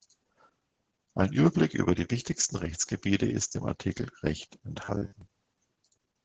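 It's a speech clip, and the whole thing has been through Opus voice compression at a low 10 kbps in SILK mode, so the damage is heavy. The coder keeps a wideband channel, but nothing survives above about 10.1 kHz, and with that few bits the linear-prediction excitation is coded very coarsely. That's why the speech comes across muffled, a bit hoarse and faintly robotic throughout, with the 20 ms frames leaving little room for detail.

On top of that, from 4.84 to 5.21 s there's robotic sound from repeated short buffers: the speech collapses into a rigid metallic buzz at 100 Hz that still roughly tracks the speech. The likely cause is audio arriving too seldom, so playback keeps looping the last chunk to fill the gap. A 100 Hz buzz fits a 10 ms buffer being repeated, and about half of that stretch seems to be repeats rather than fresh audio.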